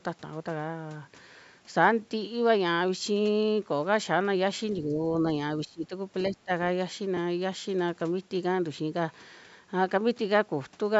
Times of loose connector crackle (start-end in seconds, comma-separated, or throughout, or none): none